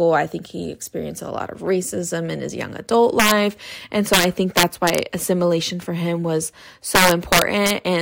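Integer overflow hits the speech three times: from 3.20 to 3.31 s after "in his young adult", from 4.14 to 4.98 s after "and so", and from 6.95 to 7.70 s after "assimilation for him was". Each time the level runs about 3 dB past full scale, and instead of being limited the sample values wrap to the opposite sign. The peaks turn into violent, sharp cracks, harsher than ordinary clipping.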